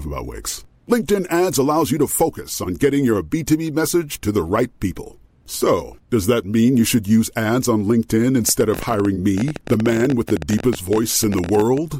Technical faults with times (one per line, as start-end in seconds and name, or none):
8.49-11.78 train of clicks